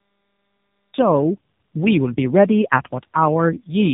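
The clip opens with digital silence until 0.94 s, where the speech cuts in abruptly mid-sound with no natural attack: a cut-off start, meaning capture began late. Throughout, tandem speech coding makes the speech rough, muffled and warbly, with nothing above 3.7 kHz, consistent with two low-rate speech codecs in series, likely G.729A and AMR-NB, each re-encoding the previous one's degraded output.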